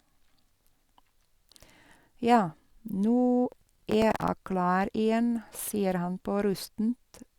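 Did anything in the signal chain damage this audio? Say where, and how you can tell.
Yes: processor overload crackle from 3.52 to 4.28 s, at the driver or buffer stage. Gritty tearing rides over the speech, made of rapid hard-edged repeats of stale audio. That fits the processor missing about twenty buffers of roughly 10 ms each over that stretch.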